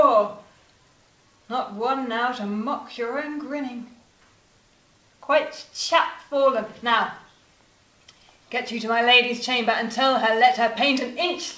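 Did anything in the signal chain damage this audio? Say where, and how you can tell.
No, nothing in the signal chain damaged this audio, and the absence of anything above 8 kHz is simply the normal band limit of the call path's codec.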